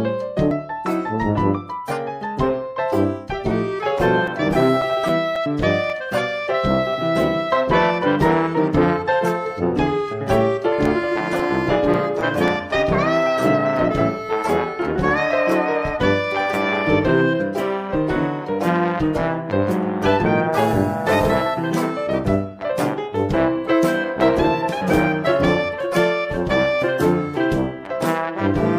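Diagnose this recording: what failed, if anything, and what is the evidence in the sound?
Playback off a damaged disc: CD scratch ticks in two bursts, about ten ticks from 3.73 to 6.17 s and nine more from 10.58 to 12.75 s, each a few milliseconds. One blemish per revolution beats the error correction, so the player patches or mutes samples.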